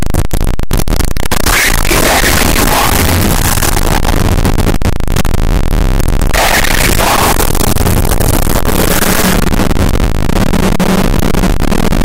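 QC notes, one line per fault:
Throughout: signed and unsigned mixed up. The sound is a constant, very loud, harsh distortion, and quiet passages are as loud as the rest. This is likely 8-bit samples read with the wrong sign convention, flipping the top bit so every zero crossing swings across the full range.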